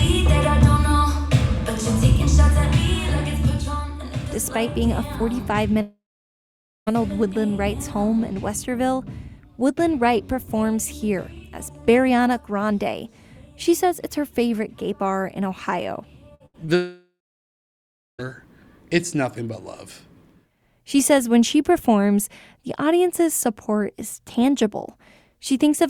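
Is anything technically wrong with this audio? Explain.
Yes. There are two long gaps and a cluster of shorter losses around the second one.

From 5.81 to 6.89 s there's what sounds like a long network dropout. The last sound carries on briefly as a fading buzz or hiss, then about 0.9 s of near-silence. That's likely a stretch of about 1.06 s that never arrived, and the audio picks up further on with that part gone.

Just before the second dropout, at 16.35 to 16.42 s and again at 16.46 to 16.56 s, you get two bursts of packet loss, about 60 ms and 80 ms missing. Each time the receiver stretches the last sound and fades it, so it comes across as a brief held buzz or hiss before the audio jumps ahead.

At 16.66 s there's a short concealed packet loss, roughly 20 ms filled in by extending the previous sound and blending back. It's just a quick smear or wobble, right after the bursts.

Then from 16.76 to 18.25 s comes the second long network dropout. 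Same pattern: a short fading tail, then about 1.05 s of near-silence. It's likely about 1.44 s of lost audio, and the sound resumes past the hole without what was missing.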